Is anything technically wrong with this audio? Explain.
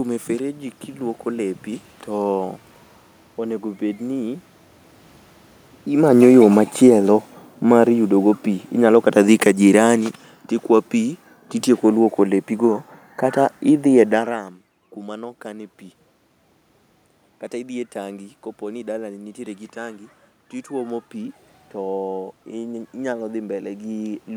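Yes, there's one fault. From 6.04 to 14.41 s the automatic gain is falling: the control found the input too loud or its background noise too strong and eased its gain down by about 12 dB, so the speech and the room noise sink together, starting just before "kuma no kane pi".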